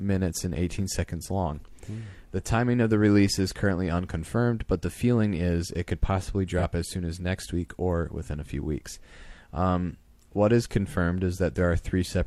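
At about 6.58 s, one stretch of coded audio failed to arrive, and the decoder bridged the gap with AAC frame loss concealment, rebuilding the missing piece from the last good spectrum instead of the real signal. The patched section runs to about 6.64 s, and its roughly 43 ms length fits a single lost frame. Because the replacement only approximates the speech, that instant sounds briefly smeared and noisy or phasey before clean decoding resumes.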